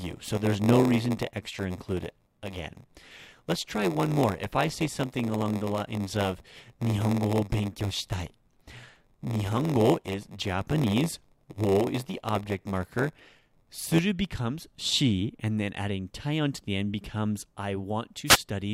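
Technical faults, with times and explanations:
0.0–13.99 s, block size mismatch (padded). One stage hands over blocks shorter than the next stage expects. The leftover part of each block is filled with silence. Those tiny gaps repeat at 93.8 Hz, giving a steady buzz under the speech. The gaps also stretch the timing, so speech runs at 0.938 times normal speed. The pattern fits a stage reading 512-sample blocks. It clears just before "becomes she and then".
18.26–18.38 s, wireless microphone noise hit. Right after "end becomes I want", a brief swish of static breaks through. The radio link of an analogue FM microphone fades when reflected signals cancel each other. The receiver's own noise then rises and briefly covers the speech. The burst lasts about an eighth of a second and then clears.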